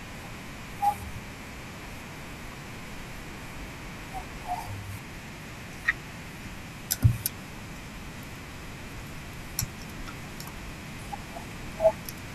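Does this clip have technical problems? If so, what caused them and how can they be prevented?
Yes. Around 1.13 to 1.16 s there is a brief stutter, a short stretch of speech heard twice in quick succession. These are repeated frames: a short run of compressed frames, apparently a couple of 20 ms blocks, was written or sent twice, so the decoder played it again and added 20 ms. Checking frame sequence numbers or timestamps on write and on receipt, and dropping duplicates before decoding, prevents it.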